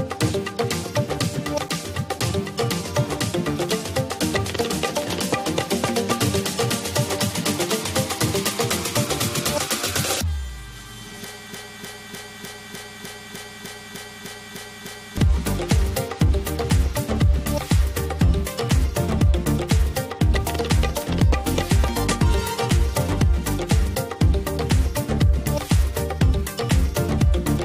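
From 11.53 s to 15.18 s, a fragment of about 0.3 s repeats exactly, back to back, twelve times, a broken-record loop that replaces whatever should have played there. The likely cause is a stalled player, encoder or stream that kept resending the last piece it held.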